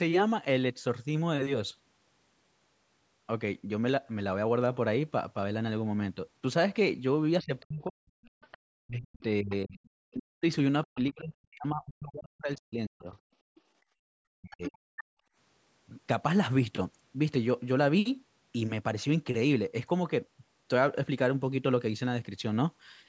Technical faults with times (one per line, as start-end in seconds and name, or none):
7.41-10.86 other side's voice leaking through
7.43-13.08 speech suppressed in double talk
8.30-8.41 background gated by the echo canceller
13.36-13.74 background gated by the echo canceller
14.02-14.79 speech suppressed in double talk
14.52-15.04 other side's voice leaking through
15.07-15.36 background gated by the echo canceller